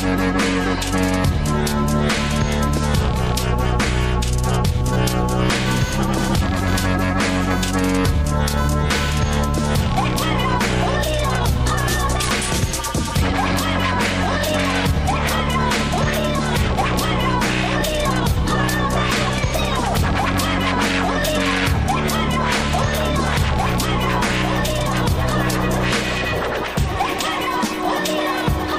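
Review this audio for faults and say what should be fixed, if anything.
Computer activity noise from 4.93 to 9.31 s: a buzzing chirp pulsing at around 500 Hz, roughly 15 dB below the sound. Processor or graphics load shifts the audio circuit's shared ground, so the noise follows the computer's activity, not the audio.

Prevent it with an external, galvanically isolated audio interface or a ground-loop isolator, and keep the interface away from the computer's busiest power rails.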